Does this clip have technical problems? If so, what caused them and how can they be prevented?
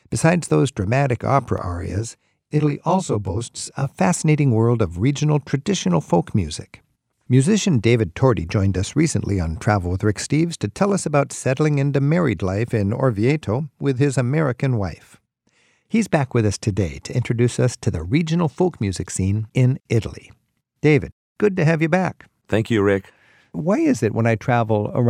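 Yes: channel delay (comb filtering) from 1.58 to 3.89 s, one channel lagging by around 20 ms, then summed to mono. Evenly spaced notches starting near 30 Hz make the speech sound rough or slightly doubled. Unlike an echo, there is no separate repeat; unlike flanging, the notches stay fixed. Keep both channels time-aligned before any mono fold-down.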